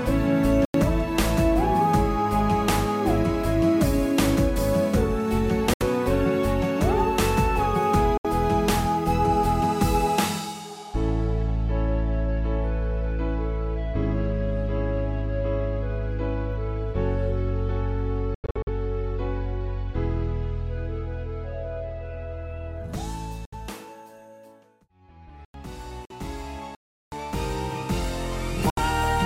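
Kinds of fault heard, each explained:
Block of digital silence: the output buffer likely went unfilled and the sound dropped abruptly to silence. Two holes last about 93 ms and one 372 ms.
Bluetooth dropout: sound vanishes for about 46 to 70 ms, with a broken cluster near 18.3–18.7 s, likely from late packets; it resumes further along.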